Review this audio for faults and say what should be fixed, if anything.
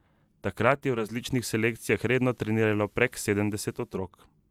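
From 0.89 to 4.06 s there's digital radio blending to analogue: a 345 ms cross-fade to FM, bringing faint hiss and a level shift of about 2 dB. Fix it by recording from a stronger digital signal or turning off the receiver's analogue blend.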